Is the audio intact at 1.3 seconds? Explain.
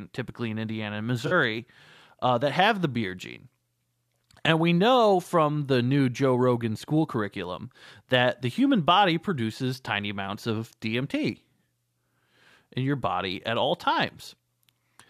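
No, there's a concealed corrupt frame from 1.26 to 1.33 s. The decoder caught damaged AAC data and covered it by muting or reusing a scrambled copy of the last good spectrum, so you hear a soft-edged dip in the speech, about 74 ms long (roughly three frames' worth), with timing unaffected.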